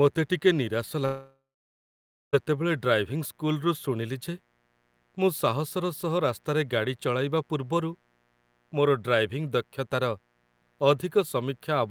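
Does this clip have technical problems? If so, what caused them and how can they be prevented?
Yes. Mains buzz runs throughout, a raspy 60 Hz buzz roughly 40 dB below the speech, caused by switching spikes from a dimmer, rectifier or poor shielding.
Prevent it with shielded, balanced cables, away from dimmers and power supplies.

Long network dropout from 1.05 to 2.35 s: the sound smears into a fading buzz or hiss, leaving about 0.9 s of near silence. This was likely lost packets, with about 1.28 s missing.
Prevent it with a stable wired connection and a larger jitter buffer.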